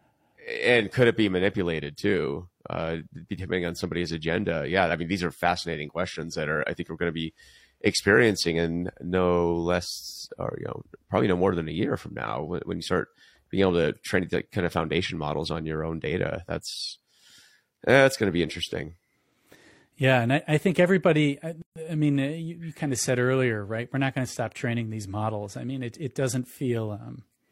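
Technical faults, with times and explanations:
21.62–21.76 s, gap at a join of encoded pieces: the speech cuts to a 139 ms gap with smeared edges, then resumes exactly where it stopped. Two separately encoded segments were joined untrimmed, leaving one's padded last frame and the next's encoder start-up delay in place.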